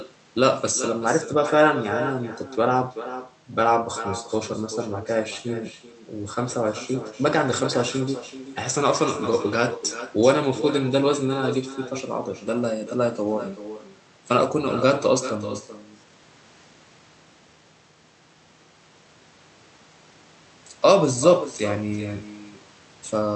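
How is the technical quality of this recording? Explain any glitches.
The recording is marred by a clear echo running through the whole clip. Every phrase is trailed, about 0.4 s later, by a thinner copy roughly 12 dB quieter. This is echo with no canceller: the far end's loudspeaker fed the speech back into its microphone, and nothing stripped it out before it returned. The call codec's band limit, with nothing above 8 kHz, also applies to that returning copy.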